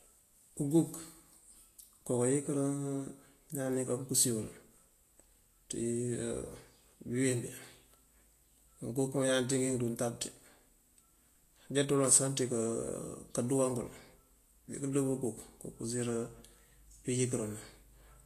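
From start to finish the speech carries plainly audible damage of the kind Vorbis compression leaves, likely from encoding at a low bitrate, with the character fitting something near 34 kbps. The treble sounds hissy and grainy, tones are roughened and consonant onsets are smeared. On a spectrogram the upper band would show a lowered cut-off, with the detail beneath it broken into speckled noise. The waveform would show softened, less crisp attack edges.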